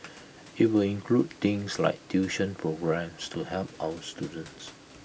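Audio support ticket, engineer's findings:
No system fault found in this speech clip; the room noise heard sits about 26 dB below the speech and belongs to the recording.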